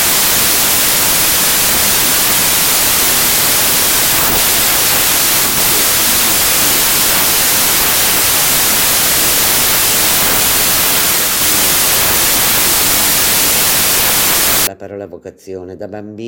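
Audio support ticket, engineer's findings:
Loud broadband noise from 0.00 to 14.67 s, original sound buried underneath. Playback at about 0.667x speed, pitch lowered to match. Wrong sample width in the decode stage. Consistent with packed 24-bit data read as 16-bit, so bytes straddle sample boundaries.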